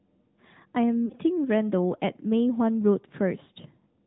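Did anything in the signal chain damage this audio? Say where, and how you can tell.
Yes. At the codec stage, the whole clip runs through the AMR narrowband mobile codec, probably around 10.2 kbps. Nothing gets through above 4 kHz, and the speech has that plainly buzzy, synthetic edge you get when a vocal tract model is driven by sparse pulses.

Further along, at the network stage, there are lost AMR speech frames. At 1.06 s two frames drop, about 40 ms, and the decoder smears the last good pitch into a brief drawn-out warble with sagging level. At 3.44 s a single 20 ms frame gives a shorter dip.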